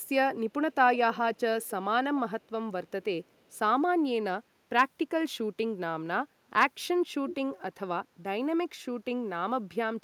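Delayed repeats of the speech surface at 0.02, 1.13, 1.34, 1.61, 2.43, 3.25 to 3.49 and 7.27 s, trailing by 254 to 295 ms. Several sit around 35 to 40 dB down; the one at 7.27 s is the loudest, about 10 dB below. This echo leak likely comes from a far-end loudspeaker whose echo canceller let some of the returned sound through.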